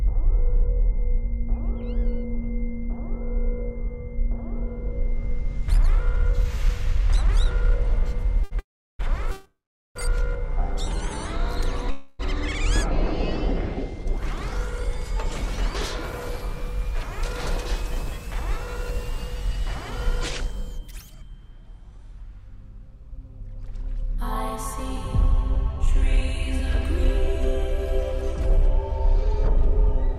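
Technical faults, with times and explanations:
8.43 to 8.53 s, short stall from a late packet: a packet arrived late, so the last sound was held about 78 ms. Nothing is lost, but it lingers slightly.
8.59 to 9.01 s, 9.31 to 9.97 s and 11.91 to 12.21 s, call audio freeze: the sound stops, then resumes where it left off. Pauses last 400, 642 and 286 ms, mostly silent in the first two. Packets were likely held up in transit.
10.52 to 11.83 s, jitter buffer slow-down: the receiver repeated tiny pieces to rebuild its reserve. Audio runs at 95% speed, same pitch, adding 73 ms.
14.21 to 30.16 s, jitter buffer speed-up: the receiver trimmed short pieces to cut excess delay. Audio runs at 104% speed, same pitch, losing about half a second overall.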